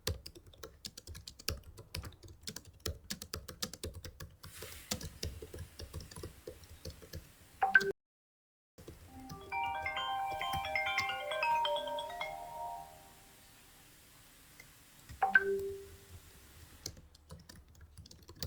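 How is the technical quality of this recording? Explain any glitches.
There's one clear glitch, an audio dropout to silence, running from 7.91 s to 8.78 s. For about 0.87 s the sound cuts out mid-flow and the gap is dead digital silence, with no room tone or background hiss underneath, then it snaps back in just as abruptly. That points to the input likely going missing for a moment, say a loose connection, a link hiccup or an accidental mute, while the recorder kept writing silence. Whatever happened during that stretch simply isn't there anymore.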